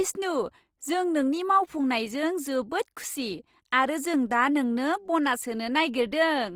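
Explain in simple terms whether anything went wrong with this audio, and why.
Something did go wrong. From start to finish, the speech has a rough, grainy edge, as if a fine hiss were woven into the sound itself rather than sitting behind it. Vowels that should be smooth come out plainly gritty. The likely cause is Opus compression: to save space, the encoder kept the overall loudness of each frequency region but ran short of detail and filled the gaps with borrowed or noise-like content, which leaves this texture.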